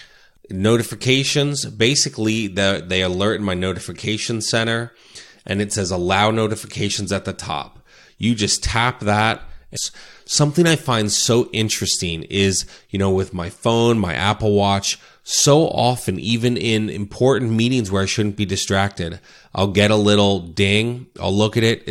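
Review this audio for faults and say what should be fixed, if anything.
Stream segment skipped at 9.75 s: right after "just tap that", the speech jumps abruptly forward with a brief blip. The likely cause is a stream segment that failed to load, so the player moved on to the next one and dropped that stretch of audio. To prevent this, add segment retry logic and a larger playback buffer before the player advances.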